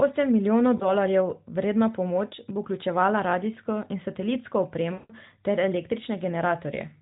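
At 0.78 to 0.89 s, lost AMR speech frames cause a brief warble, which fits one dropped 20 ms frame. At 4.94 to 5.14 s, a longer run of about 160 ms drags out and fades before the speech returns rough.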